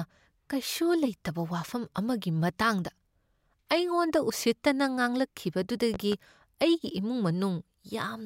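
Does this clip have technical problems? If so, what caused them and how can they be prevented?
Yes. A loud pop occurs in the speech from 5.94 to 6.15 s, just before "ꯑꯩꯒꯤ ꯏꯃꯨꯡ": two sharp pulses in quick succession, peaking about 10 dB above the speech, which continues underneath. The likely cause is a sudden voltage step or spike, from a connector being seated, a switch, a static discharge or a driver glitch, entering the signal chain, where the following circuits shaped it. To prevent this, secure cables and switch settings before recording, and use grounded, well-shielded equipment.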